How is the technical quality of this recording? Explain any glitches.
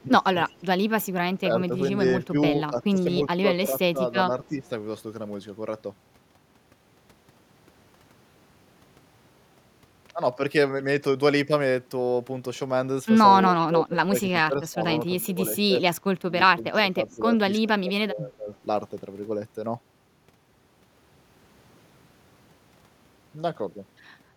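The speech has two recurring call-processing faults: the talker is ducked during double talk, and faint echo leaks back in.

Speech suppressed in double talk occurs five times: 0.0 to 0.32 s, 1.42 to 2.37 s, 2.78 to 4.72 s, 13.53 to 16.08 s and 16.44 to 18.49 s. The level dips in parts of each span. The drops are mild near 1.4 s and deep, around 20 dB, after 13.5 s. This is likely an echo canceller that could not tell the near talker from loudspeaker echo while both sides spoke. It turned everything down.

Echo leak appears at 0.49 to 0.62 s and 13.6 to 13.65 s. A faint, delayed copy of the voice comes back about 0.31 s late. It is very quiet in the first case and somewhat louder, around 25 dB below the speech, in the second. The far end likely plays the call on a loudspeaker, and its echo canceller let some of that signal through. The leaked part returned as short scraps.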